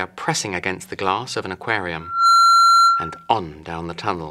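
Loudspeaker feedback squeal from 2.00 to 3.31 s: the microphone picks up its own loudspeaker, and at 1.4 kHz the loop gain tops unity, so that tone swells over roughly a third of a second into a steady whistle about 10 dB above the sound.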